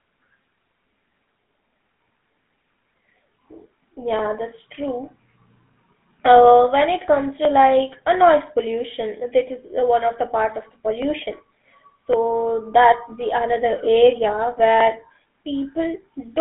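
From start to finish the speech passes through a GSM full-rate codec. Nothing survives above 3.8 kHz. The band sits around 150 Hz to 3.6 kHz. Crude pulse excitation leaves a plainly audible buzzy, gravelly roughness, which fits the 13 kbps full-rate coder.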